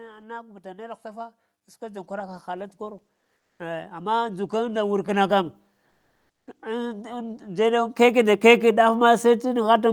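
From 0.05 to 5.52 s, automatic gain is rising. The level climbs by about 11 dB. Speech and background swell together, as the gain control treats the input as too quiet.

At 3.39 s, comfort noise replaces the background for 200 ms. The real room sound gives way to a flat, featureless hiss about 5 dB different in level. At 5.89 s it happens again, for 580 ms, at an unchanged level. This is likely discontinuous transmission in the Opus codec, filling pauses with synthetic noise.

From 6.6 s to the end, the automatic gain rises once more, lifting everything gradually.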